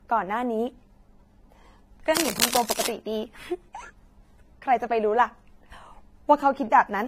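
From the start, the speech carries coding damage. Nothing is heard above 16.4 kHz. Two kinds of coding artefact sit together. This is likely transcoding between lossy codecs: a low-rate HE-AAC encode, then AAC-LC, each adding its own damage.

From 2.15 to 2.89 s, dense, uneven scratching rustles over the speech. It is only slightly quieter than the speech. This points to cable scratch noise, likely from a worn connector or cable being moved, its contact resistance jumping rapidly.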